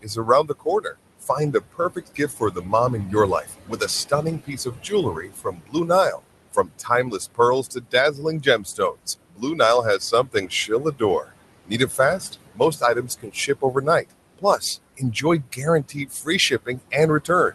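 A noise suppressor runs over the whole of this speech recording, pulling down whatever it judges to be steady background by about 21 dB, so the room noise, which sits about 13 dB under the speech, dips away between phrases and returns beneath them. The same processing also produces speech cut by the noise suppressor, mistaking quieter parts of the speech for noise and turning them down by about 19 to 22 dB. This happens in five stretches, at 0.02–2.73 s, 3.05–6.21 s, 6.52–11.3 s, 11.65–14.62 s and 14.97–17.55 s, with roughly a second to a second and a half of swallowed, faint consonants and word endings within each of the first four.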